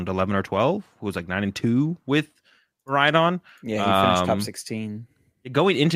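No technical faults are audible anywhere in the recording.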